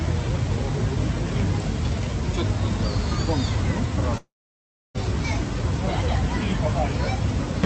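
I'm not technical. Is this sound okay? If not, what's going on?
No. There is a gap from about 4.17 to 4.96 seconds. The sound stops, a short fading buzz or hiss stands in for it, and then there is near silence. About 0.78 seconds of the real audio is lost for good. When the sound returns, it simply carries on past the missing part. This is most likely a long network dropout: the connection stopped delivering audio, and the receiving end could only fill the hole. The call line also trims the sound above about 8 kHz.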